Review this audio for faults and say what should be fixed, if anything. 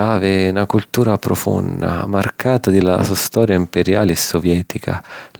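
Nothing here needs fixing.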